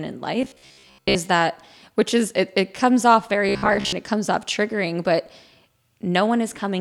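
From 0.42 to 1.17 s and 3.49 to 3.95 s, speech becomes a rigid metallic buzz near 66.7 Hz. This robotic sound is likely from repeated short buffers, a 15 ms slice looping over most of the real audio.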